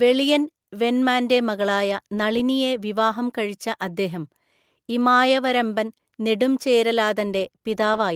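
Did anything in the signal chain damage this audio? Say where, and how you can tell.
No, nothing in the signal chain has audibly damaged this speech. At no point does the sound change character in a way that would point back to any stage between the source and playback.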